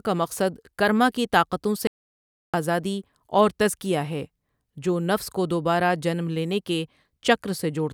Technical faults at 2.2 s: audio dropout to silence

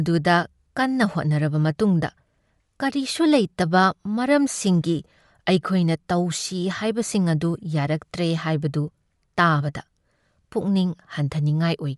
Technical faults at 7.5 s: Bluetooth LC3 compression

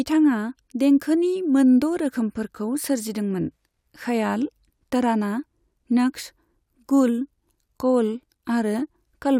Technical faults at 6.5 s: none

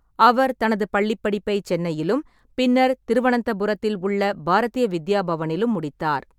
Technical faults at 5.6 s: none

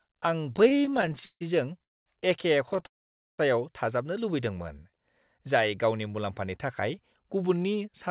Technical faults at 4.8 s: jitter buffer slow-down

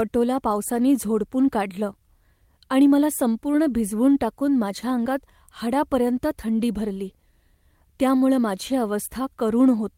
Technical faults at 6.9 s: none

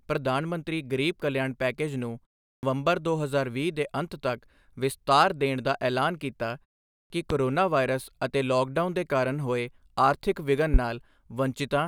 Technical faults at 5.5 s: none

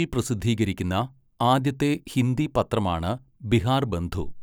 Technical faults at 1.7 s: none

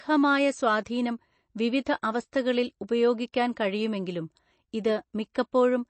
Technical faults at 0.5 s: MP3 compression

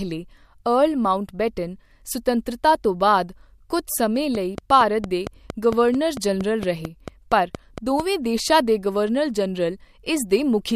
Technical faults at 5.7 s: train of clicks

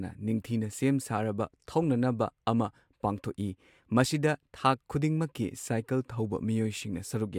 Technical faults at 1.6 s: none

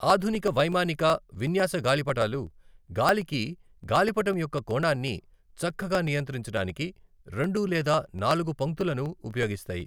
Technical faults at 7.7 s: periodic USB or driver dropouts

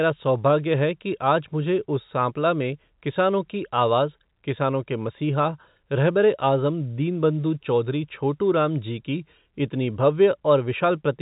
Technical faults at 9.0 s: none

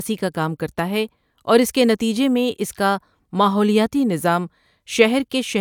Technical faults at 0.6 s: none

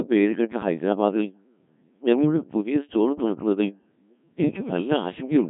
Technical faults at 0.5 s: Codec 2 vocoder

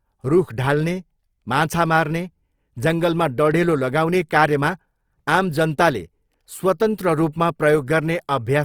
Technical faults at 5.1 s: Opus compression

